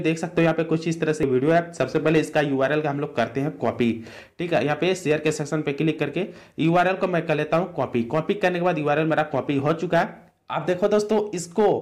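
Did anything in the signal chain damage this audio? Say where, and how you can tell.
Yes. Damaged data in a compressed stream shows up at 1.23 s as a brief blip at the codec stage. Corrupted bytes there left the decoder misreading a frame and losing sync until it found the next valid frame header.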